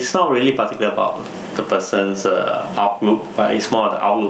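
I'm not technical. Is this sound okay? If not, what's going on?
No. The whole clip has gain pumping. Loud and soft parts end up closer in level, and the sound is squashed. The level swings a lot. The likely cause is the input gain set far too high, with an automatic limiter slamming it down.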